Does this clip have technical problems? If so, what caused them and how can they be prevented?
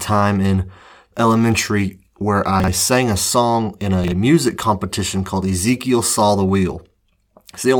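Yes. The speech has chunks out of order twice: at 2.6–2.68 s, after "in elementary where", and at 4.04–4.12 s, just before "music competition called". Each time a 40 ms chunk lands one slot late, so the sound jumbles briefly. A properly sized reorder buffer that sequences chunks by timestamp before playback would prevent it.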